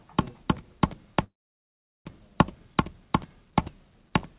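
A recording of sounds, band-limited to 4 kHz as on a G.711 call path, has a call audio freeze from 1.24 s to 2.07 s. The last sound is briefly extended, then about 0.76 s is silent before the audio resumes where it stopped, with nothing lost. The likely cause is delayed packets draining the jitter buffer, inserting a gap of about 0.81 s.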